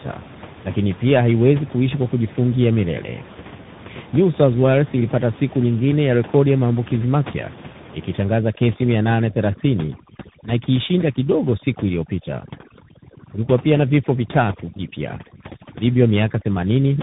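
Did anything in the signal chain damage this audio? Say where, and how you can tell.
Yes. The codec stage shows tandem speech coding throughout. Nothing sounds above 3.8 kHz. The speech is rough, muffled and warbly. It passed through an AMR-NB 7.95 kbit/s coder, then G.711 A-law, then CVSD. Each coder re-encoded the previous one's errors, so the damage compounds.

Overdone noise removal appears in call processing from 8.25 s to the end. The room noise, sitting about 17 dB below the speech, drops and breaks up into twinkling specks. The suppressor cuts bands it judges noisy, taking quiet speech with them.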